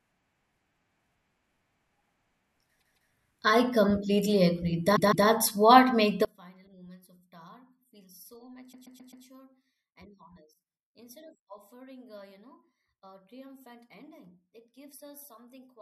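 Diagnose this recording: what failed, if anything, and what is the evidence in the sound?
The audio stutters three times, with a short block replaying: 2.78 to 3.10 s just before "I completely agree", 4.95 to 5.27 s between "I completely agree" and "what makes", and 8.71 to 9.24 s. This is repeated frames at the storage or codec stage. A 156.7 ms block plays twice extra at the first two spots, adding 313.5 ms each. At the third, a 130.6 ms block plays four extra times, adding 522.4 ms. Each block length points to compressed frames of roughly 26 ms being written more than once.

From 6.25 s, right after "what makes", to the end, the speech collapses by about 29 dB into a faint residue when summed to mono. That is the signature of one channel inverted, likely a polarity reversal in the analogue wiring. The material common to both channels cancels, leaving only their small difference.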